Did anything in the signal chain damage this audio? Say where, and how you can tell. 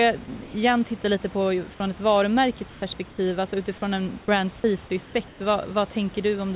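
Yes. From 0.44 to 0.54 s, about 100 ms of sound, about 80 ms of it speech, gives way to steady noise. The likely cause is the call's voice detector misjudging part of the signal as background. Noise filling the gap, not silence or a glitch, points away from packet loss.

Comfort noise likely replaces the background in the call processing at 2.7–2.82, 3.1–3.18, 5.06–5.14 and 5.28–5.4 s. The pauses turn featureless and drop about 1 to 4 dB, unlike the real room noise around them.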